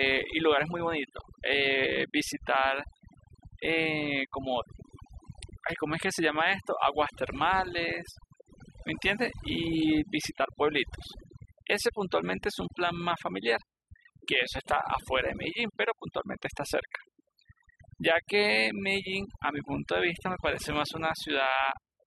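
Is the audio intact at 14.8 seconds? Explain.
No. At 14.8 s, as across the whole clip, overdone noise removal is at work: individual frequency bands near the estimated noise floor are pulled down or gated off, taking quiet speech detail with them. The background drops and breaks up into twinkling, warbling specks.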